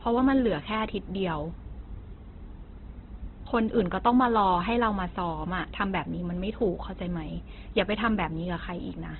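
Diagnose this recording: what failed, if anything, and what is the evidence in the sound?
The codec stage failed. Throughout the speech nothing sits above 4.2 kHz, and voiced sounds turn grainy and rough rather than swirly as MP3 would. That points to heavy Opus compression, likely in music mode at about 12 kbps, filling starved bands with noise instead of leaving holes.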